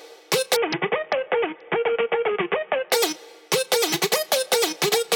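From 0.56 s to 2.92 s a Bluetooth SBC bit pool drop dulls the treble and adds gritty quantisation noise. This fits the bit pool falling from 31 to 5, near 50 kbps. Unlike packet loss, nothing drops out.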